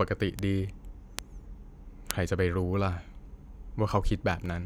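At 0.39, 1.19 and 2.11 seconds there's a bit error spike each time: a single flipped bit knocks a couple of sample values off by a power of two before they snap straight back, which fits a glitch lasting just two or three samples. You hear a dry, broadband tick that has nothing to do with the speech around it. They get louder as they go, peaking at about -14, -8 and then -2 dBFS.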